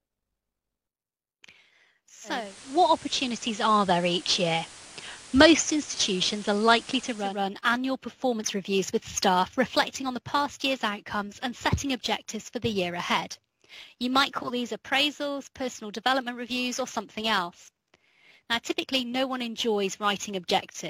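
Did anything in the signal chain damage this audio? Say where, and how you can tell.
Yes. From 2.24 s to 7.43 s the audio goes through digital radio blending to analogue: over a 354 ms cross-fade it takes on a steady hiss roughly 20 dB down and shifts in level by about 4 dB, then blends back. This points to the reception stage, where a hybrid receiver dropped its digital stream and fell back to the station's FM broadcast, with its narrower bandwidth and noise, until the digital signal returned.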